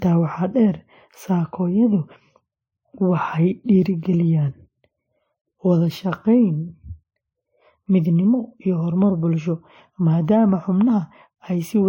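Speech that was likely encoded to a low-rate MP3, around 38 kbit/s by its artefacts, then re-encoded to WMA. This transcoding between lossy codecs stacks both codecs' smearing throughout, with nothing above 16.7 kHz.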